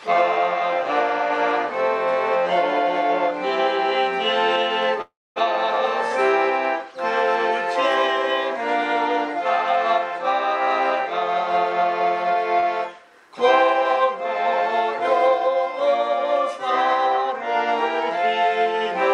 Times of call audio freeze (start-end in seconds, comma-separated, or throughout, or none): 5.01-5.38